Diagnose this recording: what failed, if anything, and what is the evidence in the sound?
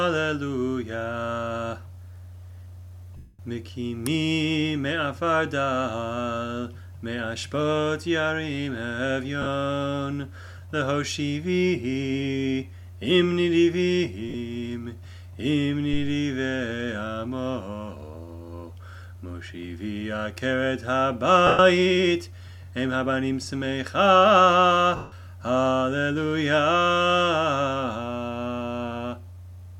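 The failure is at the codec stage, over the Bluetooth link: lost LE Audio frames. Gaps occur at 3.17 s (220 ms), 9.42 s (40 ms), 14.29 s (50 ms), 21.47 s (120 ms) and 24.96 s (160 ms). Each is filled by a noisy smear, and tones lose their pitch. The LC3 decoder repeats the last good spectrum with random signs, then fades it. So the longer gaps sink towards silence.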